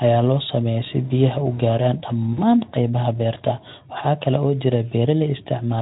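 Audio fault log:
2.33–2.41 s, VoIP packet loss concealed by the speech codec: just after "si biyaha u gaaraan", about 40 ms of audio goes missing, which fits two lost 20 ms frames. The Speex decoder repeats its last pitch and filter at falling gain, so the sound smears into a brief buzzy tone or coloured noise that fades.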